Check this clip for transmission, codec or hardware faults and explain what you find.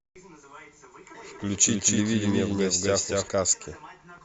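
One fault is present: a doubled audio track from 1.18 s to 3.28 s. The same speech sounds twice, with a full-band copy about 200 ms behind at roughly equal level. It lacks decay or room colour and switches on and off abruptly, likely from a second, slower capture path.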